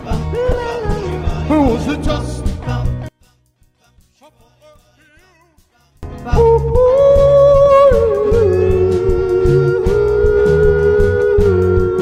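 From 0.52 to 2.09 s a call bitrate drop takes the stream from 128 kbps down to 15 kbps, staying at the floor for about 1.5 s. The encoder codes coarsely and trims the highs, so the sound turns muffled and watery rather than simply quieter, then brightens on recovery.

From 3.09 to 6.03 s the level falls by about 35 dB, leaving only a faint residue instead of an even fade or dropout. That points to one channel inverted, likely, with the shared content cancelling when the two channels combine in mono.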